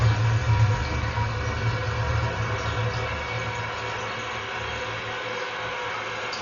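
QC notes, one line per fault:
Throughout, likely Dolby Digital compression: nothing above 6.9 kHz, with heavy fluttering dither roughness around tones, not a clean low-pass; fits roughly 40 kbps.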